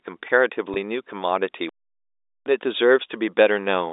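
At 0.74 s there is packet loss with pitch repetition. About 20 ms of audio goes missing, which fits a single lost packet. The receiver fills the hole by repeating the last pitch period of the speech. The gap is short, so the repeat does not fade to silence. It sounds like a brief held, slightly buzzy tone. The speech then returns with a short cross-fade.

From 1.69 s to 2.46 s there is a playback stall. The output drops to silence for about 0.77 s in mid-flow. The likely cause is the player running out of data or its thread being blocked. The sound then resumes. Throughout, the speech sits in the narrow telephone band of G.711 coding, roughly 300 Hz to 3.7 kHz.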